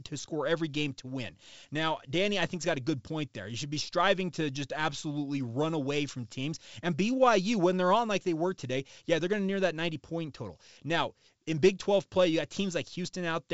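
No faults to report: the speech sits on G.722 wideband telephone coding at 64 kbit/s, with the band ending around 7.7 kHz and coding damage faint at most.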